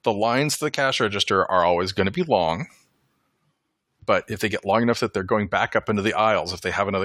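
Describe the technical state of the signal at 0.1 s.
At 0.1 s the signal is intact, with no audible fault at that moment.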